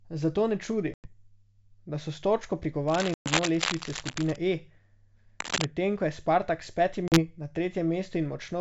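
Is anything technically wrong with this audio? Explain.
Yes. This speech clip has two recurring faults over a G.722 wideband call. The coding itself, at what sounds like 64 kbit/s, adds at most a faint upper-band hiss.

Packet loss on an ADPCM call hits at 0.94–1.11 s, just after "ne čudi", at 3.14–3.28 s and at 7.08–7.20 s. Gaps of 100, 120 and 40 ms are filled with silence. The decoder's predictor and step size then lag the sender's, so speech resumes slightly distorted before settling. On a waveform these show as flat, hard-edged holes. A spectrogram shows a vertical blank column.

Cable scratch noise runs from 2.87 to 4.36 s, beginning after "da so s točko", and again from 5.40 to 5.67 s, just before "medtem ko je". The most likely cause is a worn cable or connector whose contact resistance fluctuates. That produces dense, irregular crackle at roughly the speech's own level. In the waveform it looks like ragged spiky bursts. 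The spectrogram shows speckled broadband smears.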